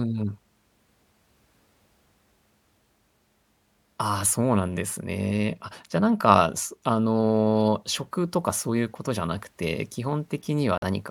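Near the end, from 10.78 to 10.84 s, the speech drops abruptly into a hole of dead silence about 66 ms long, with no fade in or out, and then resumes on time. This is a corrupt frame muted fault. Flipped bits left compressed frames undecodable, so the decoder rejected them and the player filled their slot with silence. The length of the gap fits two consecutive frames being lost.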